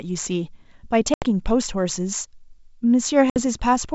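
Packet loss on the ADPCM call knocks out two stretches of the speech: about 80 ms at 1.14 to 1.26 s and about 60 ms at 3.30 to 3.37 s, each a few packets' worth. The gaps are filled with silence, so each is a sharp-edged hole in the wideband sound. The decoder's predictor and step size drift away from the sender's during the loss, so the speech comes back with brief, slight distortion before settling.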